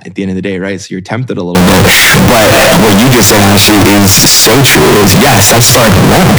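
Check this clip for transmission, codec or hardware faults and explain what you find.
There's one clear fault. From 1.55 s to the end, the speech turns into a loud, harsh, almost square-edged blast with the background noise as loud as the voice, though the pitch survives. That's likely float read as integer: 32-bit float samples decoded as 32-bit integers.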